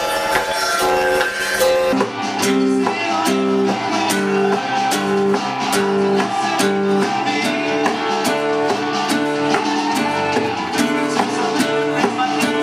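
Planar audio read as interleaved, from 0.0 to 1.94 s, gives the sound a robotic buzz near 86.1 Hz with no clear octave shift. Each 11.61 ms block, which fits a 512-sample size, plays its left half then its right half at double speed.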